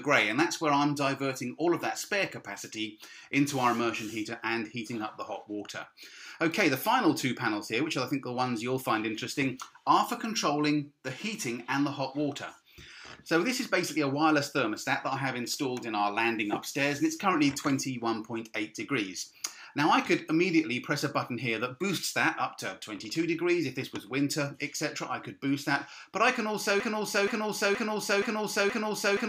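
A broken-record loop begins at 26.80 s and runs to the end of the clip. A fragment about 474 ms long repeats exactly, back to back, five times, giving a stuck, stuttering cycle with no new material. The likely cause is a player, encoder or stream that stalled and kept resending the last piece of audio it held. Whatever should have followed 26.80 s is lost.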